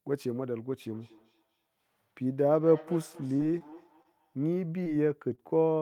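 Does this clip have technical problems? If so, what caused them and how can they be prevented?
Yes. From 0.91 to 4.72 s, each word returns roughly every fifth of a second, thin and ringing, at about 21 dB below the speech. This is feedback echo between two devices: one device plays the other's audio, and that microphone picks it up again, beyond its own canceller's reach. Keep only one device's audio and microphone active per room.

From 3.27 to 4.07 s the sound turns choppy and robotic. This is repeated packet loss: six gaps, the longest 23 ms, were patched by extending earlier sound. Use a wired or more stable network connection.

At 4.84 to 4.87 s there is a brief smear. This is short concealed packet loss: about 20 ms never arrived and was filled from the preceding sound. The same network fix prevents this.

At 5.35 to 5.42 s a sound is held slightly too long. This is a short stall from a late packet: the jitter buffer ran dry, and the receiver stretched the audio about 24 ms until the packet arrived. 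A steadier connection or a slightly deeper jitter buffer avoids it.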